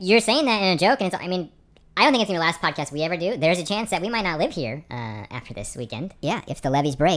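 Wrong sample rate throughout: the speech runs about 1.38 times too fast and roughly 5.6 semitones high, which fits 16 kHz audio played back at 22 kHz without conversion.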